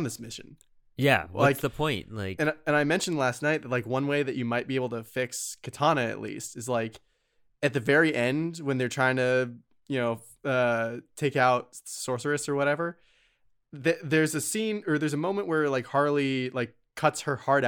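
No audible technical faults here.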